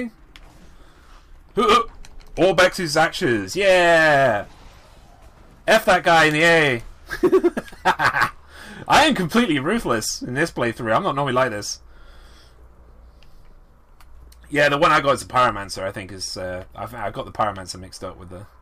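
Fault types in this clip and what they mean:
Drift correction step: the sound slows 5.4% and sags about 96 cents, nearly a semitone, at 1.78–3.45 s, then runs 5.4% fast and about 91 cents sharp at 6.88–7.94 s, snapping back each time; likely clock-matching software stepping its rate to rebalance a buffer.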